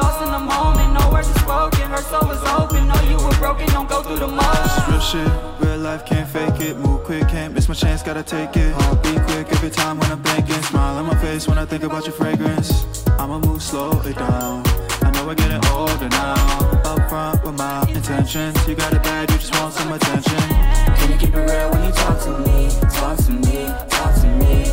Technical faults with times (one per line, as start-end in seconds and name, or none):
0.00-24.72 sample clock jitter